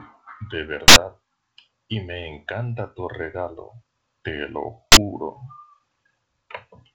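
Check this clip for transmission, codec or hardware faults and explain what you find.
Two faults of one kind break the speech: invalid numbers at full scale, from 0.88 to 0.96 s and from 4.92 to 4.96 s.

A calculation produced infinite or invalid values. These were pinned to the largest positive or negative sample. The output holds flat at one extreme value, far beyond the speech peaks, for 80 ms, then for 40 ms. Each block is heard as a very loud pop, with no sound in between.

The G.722 wideband telephone coding underneath carries content only up to 7.9 kHz. Its light coding damage fits the 56 kbit/s mode.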